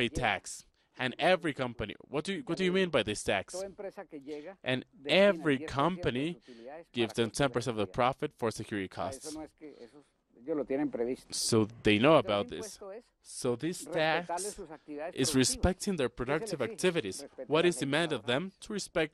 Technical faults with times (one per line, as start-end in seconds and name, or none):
none